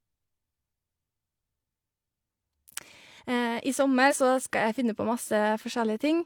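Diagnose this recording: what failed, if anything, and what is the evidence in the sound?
Codec stage: compressed frames skipped around 4.08 to 4.14 s, so the speech jumps ahead about 40 ms.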